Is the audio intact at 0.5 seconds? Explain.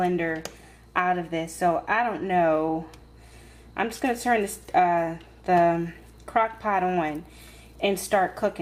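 Yes, the audio is intact at 0.5 seconds, with no fault present at that moment.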